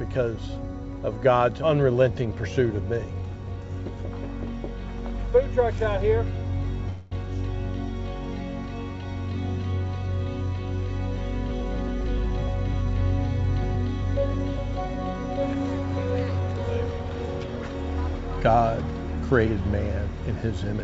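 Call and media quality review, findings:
Call audio freeze, 6.90–7.13 s: about 215 ms inserted, nothing lost. Likely jitter-buffer underrun from delayed packets, with the last sound extended as a fading buzz or hiss. Spectrogram: smeared, decaying band where structure stops. Waveform: continuation, no dropout, audio resumes intact.

Jitter buffer speed-up, 16.32–17.57 s: sound runs 108% fast, pitch unchanged. The buffer drained its excess by cutting short pitch-period pieces repeatedly, roughly 100 ms in all. Waveform: periodicity unchanged, whole cycles removed. Spectrogram: harmonics steady, events packed closer. G.722 path band-limited at 7 kHz.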